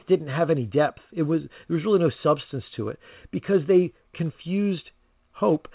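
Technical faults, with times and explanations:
Nothing to flag here: the speech comes over an ordinary call line, with the expected telephone-band ceiling at 4 kHz, and no faults turn up anywhere in it.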